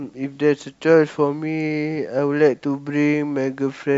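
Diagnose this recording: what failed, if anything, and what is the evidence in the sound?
Nothing in the chain fails audibly: no stage from capture to playback leaves a mark on this speech recording.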